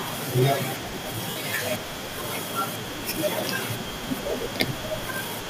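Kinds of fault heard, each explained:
Lost LE Audio frames: Stretches of the Bluetooth LE Audio stream never arrived, so the decoder, likely LC3 with its light coding, filled each gap by reusing the last spectrum with scrambled phase. The speech turns briefly into a noisy smear, first for about 60 ms at 1.30 s, which fits six 10 ms frames, then for about 30 ms at 3.93 s, which fits three.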